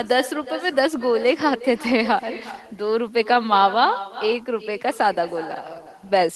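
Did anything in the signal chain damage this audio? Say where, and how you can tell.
Yes. In call processing, the far end's loudspeaker audio reached its microphone and no echo canceller removed it. Throughout the speech, each phrase returns about 15 dB quieter and roughly 0.4 s later, a thinner copy trailing the original after the network round trip.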